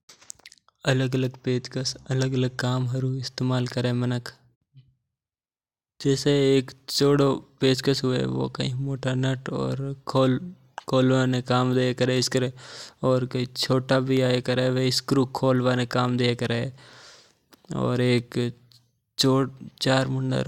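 Periodic USB or driver dropouts appear from 10.17 s to 18.18 s, recurring every 2.0 s, about five in all. Each time, something on the system stalls the USB bus or audio driver, and a tiny sliver of the speech, a small fraction of a millisecond, never arrives and is replaced by silence. The cut is too short to hear as a gap. Instead it comes through as an evenly spaced tick or click riding on the speech.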